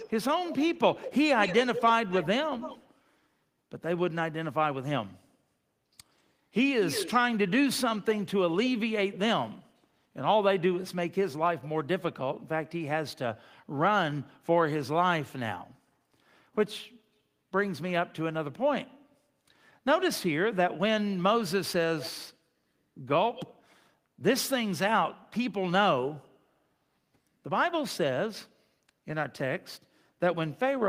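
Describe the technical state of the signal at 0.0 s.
Right at the start, from 0.0 to 0.12 s, there's a brief echo leak: a faint, delayed copy of the speech trails the original by about 182 ms, sitting well below it, somewhere around 15 dB down. It's only a short scrap, so it comes across as a quick ghostly doubling. The likely cause is a far end on speakerphone whose echo canceller didn't fully scrub what its mic picked up, so some got sent back.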